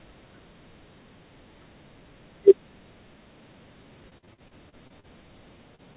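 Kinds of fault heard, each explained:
Repeated packet loss (robotic sound): choppy sound with pieces missing from 4.1 to 5.06 s. Eight separate gaps, the longest 45 ms, were each patched by extending the preceding sound.
Short concealed packet loss: a brief smear at 5.75 to 5.81 s, where about 30 ms of audio never arrived in time and was filled by continuing the previous sound.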